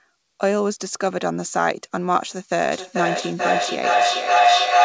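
A feedback howl starts at 2.72 s and lasts to the end of the speech clip. Sound looping from loudspeaker back into microphone gains level each trip, repeating about every 0.4 s, so it swells into a tone near 700 Hz and peaks about 7 dB above the speech.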